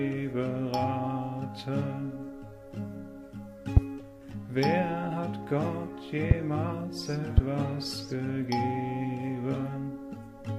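A voltage step likely entered the chain, giving a loud pop, a sharp thump far above the sound, at 3.77–3.80, 6.31–6.34 and 7.38–7.41 s.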